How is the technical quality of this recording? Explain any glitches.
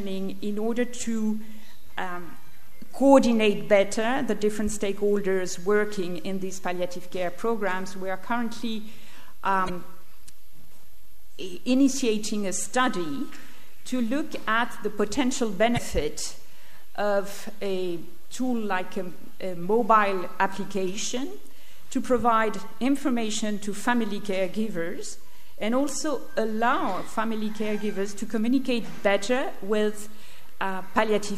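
Two brief glitches mar the recording, both from damaged data in a compressed stream, at 9.66–9.70 s and 15.74–15.79 s: corrupted bytes throw the decoder out of sync, producing short glitches of roughly 40 ms.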